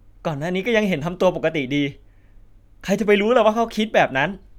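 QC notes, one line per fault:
No faults found.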